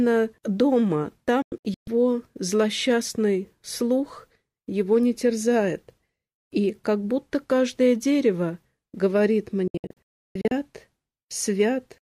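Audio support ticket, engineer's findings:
Digital broadcast dropout, 1.42–1.88 s and 9.68–10.52 s. Receiver muting on lost or checksum-failed frames, roughly 3 ms fades. About 288 ms missing across several holes, longest 128 ms; then about 544 ms, longest 288 ms. Gaps fit 32 ms frames.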